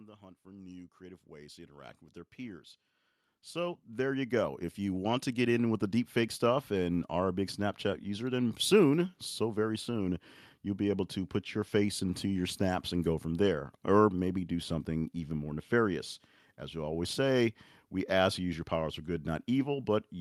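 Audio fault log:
0.14–5.91 s, automatic gain rising: the level climbs steadily by about 17 dB over nearly six seconds, settling just before "deepfake stuff and are". The gain control judged the input too quiet and kept raising its gain, so the speech and the background noise floor swell together. That slow, sustained rise sets it apart from compressor pumping, where the gain reacts quickly to each phrase and the noise breathes up in the gaps between phrases.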